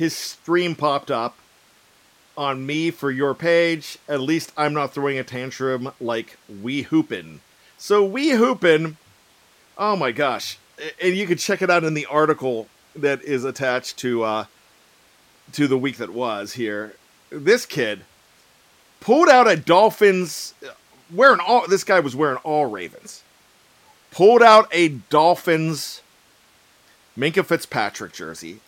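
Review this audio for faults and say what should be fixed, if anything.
Nothing stood out on listening, so there is nothing here that needs fixing.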